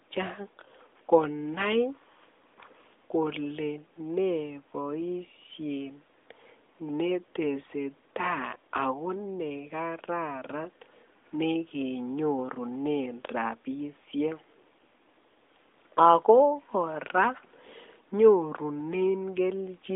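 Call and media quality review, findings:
Nothing stood out on listening to this speech clip; the narrowband mobile-call sound, with nothing above about 3.8 kHz, is as expected for this line.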